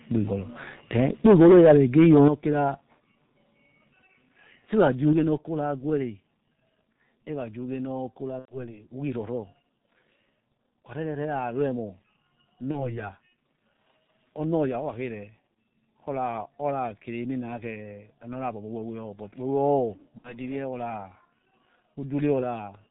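G.723.1 codec damage runs through the whole clip. The speech is cut off above 4 kHz and sounds muffled and hoarse, with smeared consonants. The heavy coarseness points to the 6.3 kbit/s mode, whose 30 ms frames update the voice model too slowly.

VoIP packet loss concealed by the speech codec strikes at 8.39–8.56 s, 12.71–13.01 s and 20.18–20.34 s. The decoder extends its last pitch and filter with falling gain, turning speech into a fading buzz or coloured noise that fits roughly three, one and two lost frames.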